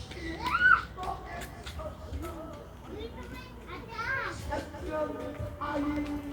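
From 1.86 s to the end, there's video or display buzz: a screen or video cable leaking in, giving a 60 Hz field-rate buzz with hash, sitting well below the sound.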